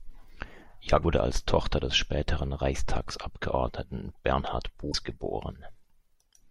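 At 1.00 to 1.04 s and again at 4.91 to 4.95 s, damaged data in the compressed stream makes the decoder lose sync, giving brief glitches.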